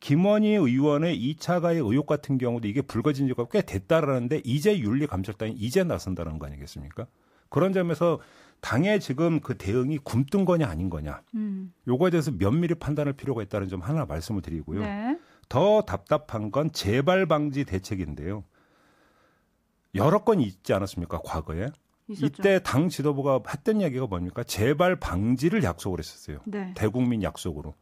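No technical faults can be heard anywhere in the recording.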